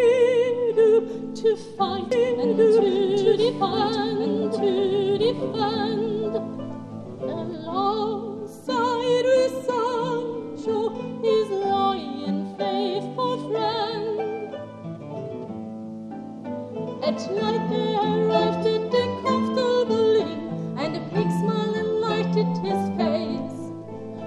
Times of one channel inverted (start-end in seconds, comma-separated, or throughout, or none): none